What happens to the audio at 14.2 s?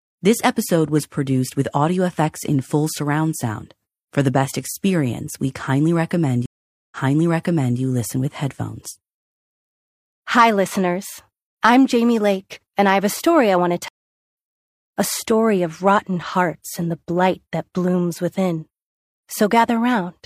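At 14.2 s the speech is silent. Right after "story I want to" it drops out from 13.88 to 14.36 s and resumes about half a second further on. This is a stream reconnect: the connection broke and a fresh decoder restarted at a later point in the live stream.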